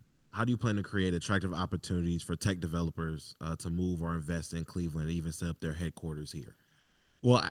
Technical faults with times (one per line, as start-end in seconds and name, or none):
0.03-0.31 comfort noise in place of the background
6.79-7.19 comfort noise in place of the background